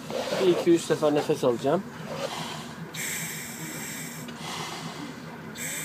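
Nothing stood out as a technical problem on listening.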